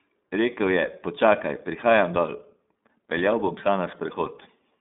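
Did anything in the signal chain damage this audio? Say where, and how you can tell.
Yes. Throughout the speech, the sound is thin and plainly rough and synthetic, with nothing above 3.8 kHz and little below 200 Hz. This points to the codec stage: the iLBC codec, which codes each frame independently. The roughness fits its 30 ms, 13.33 kbps mode.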